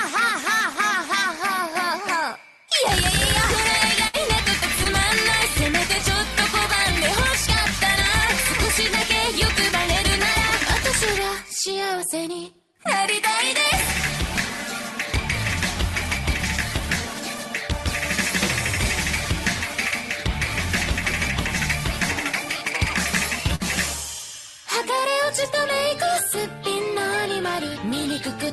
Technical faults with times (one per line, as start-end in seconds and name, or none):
4.07-4.15 burst of packet loss
4.83-4.87 short concealed packet loss
23.55-23.62 short concealed packet loss